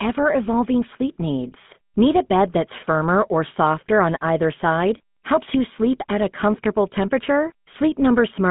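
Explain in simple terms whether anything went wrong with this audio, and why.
The whole clip, from start to finish, has been through a GSM full-rate codec, the old mobile-phone speech coder, and the damage is easy to hear. It rebuilds the speech from a rough model of the throat and mouth driven by a coarse pulse pattern, which is where the buzzy, gravelly edge comes from. The line also keeps only about 150 Hz to 3.5 kHz, with nothing at all above 3.8 kHz, so the speech sounds thin and muffled.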